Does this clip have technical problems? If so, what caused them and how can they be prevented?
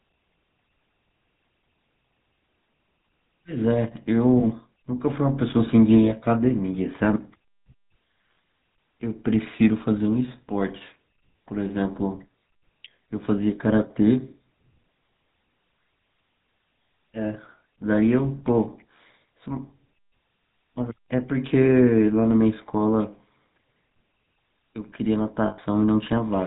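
Yes. GSM full-rate codec damage runs through the whole clip: the speech is rebuilt from a vocal-tract model excited by sparse, regularly spaced pulses, giving a buzzy, gravelly roughness and nothing above 4 kHz, consistent with a 13 kbps GSM full-rate link. Carrying the call over a wideband or modern codec would avoid it.

Lost GSM frames occur at 4.40–4.43 s and 25.46–25.59 s. The decoder fills each gap by repeating the last good frame, so the sound briefly holds as a rough metallic ring, about 20 ms the first time and 120 ms the second, which points to one and then about six missing frames. A cleaner radio path or stronger error protection would prevent these dropouts.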